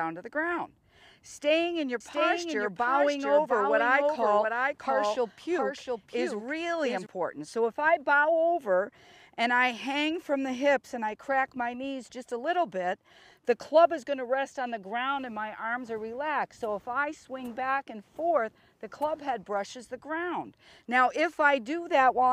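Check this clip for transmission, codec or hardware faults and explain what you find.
One fault stands out: a doubled audio track between 2.00 s and 7.06 s. Across that span a second full-band copy of the sound runs roughly 0.7 s behind the original and a few decibels quieter, about 5 dB down. It carries no decay or room colouring, and it cuts in and out abruptly at both ends. The likely cause is the same signal being captured a second time through a slower path. On a spectrogram every event appears twice, the repeat offset by the fixed lag. The waveform shows overlapping duplicate envelopes with hard edges.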